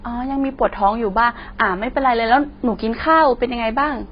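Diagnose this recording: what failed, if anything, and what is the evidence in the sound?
AAC compression runs throughout the speech, with nothing above 5.2 kHz, and sibilants sound fizzy and smeared. The damage is heavy, which fits AAC-LC at around 16 kbps, likely a codec stage that lowered its cut-off and coarsely quantised the remaining frequency lines.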